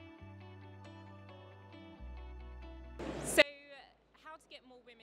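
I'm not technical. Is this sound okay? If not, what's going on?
No. From 3.42 s to the end, the sound suddenly drops to a faint trace. The likely cause is one channel inverted: one side of the stereo pair is flipped upside down, so when both sides combine, the shared sound cancels out.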